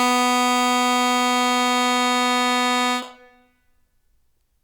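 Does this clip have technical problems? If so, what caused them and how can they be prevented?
No, this music clip has no technical problems. There is nothing here that needs a cause or a fix.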